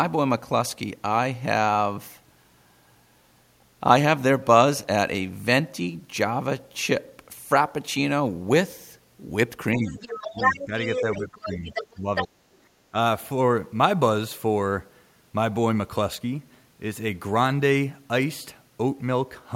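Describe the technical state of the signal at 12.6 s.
From 12.58 to 12.63 s the room background dips by about 7 dB for roughly a twentieth of a second: background gated by the echo canceller, which clamped the microphone while far-end sound played. Unlike a dropout, the level dips partially and recovers rather than going silent.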